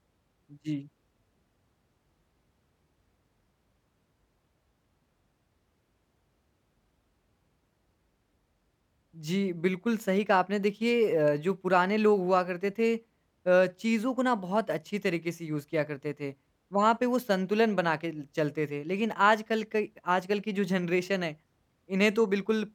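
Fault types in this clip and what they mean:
No fault types are present in this clip, so there is nothing to list.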